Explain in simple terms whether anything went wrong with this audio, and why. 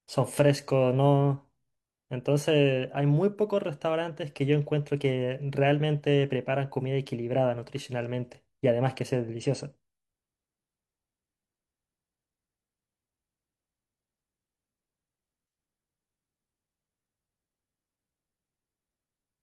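One thing did go wrong. Around 9.38 to 9.44 seconds into this speech, there's a short glitch, a quick chirp or blip lasting only a few hundredths of a second. That's damaged data in a compressed stream: a small piece of the compressed file got corrupted, so the player couldn't make sense of that bit. It briefly lost its place, spat out a garbled noise, then found the next good chunk and carried on.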